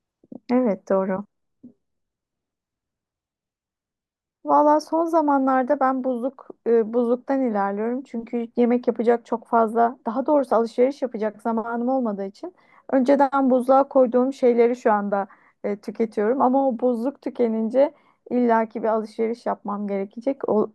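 Nothing stood out on listening to the speech recording.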